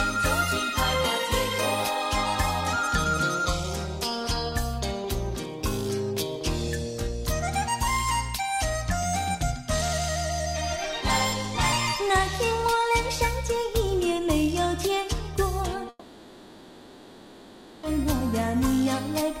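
From 15.89 s to 17.85 s the sound turns into a fading, buzzy continuation, then near silence, and resumes with about 1.9 s lost, likely a long network dropout. A spectrogram shows smeared, decaying bands then a blank gap, and the waveform flattens.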